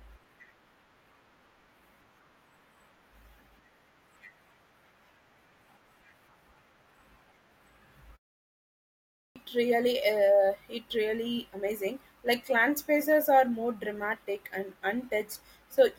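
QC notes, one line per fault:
8.87–9.36 s, clipped start after a pause: following a gap of 0.78 s, sound resumes abruptly out of silence with its opening missing. About 0.49 s is lost, so the first sounds of the utterance never arrive and the onset has no natural attack. The output device dropped into a low-power or unlocked state during the pause and took roughly half a second to wake and resynchronise before it passed audio again.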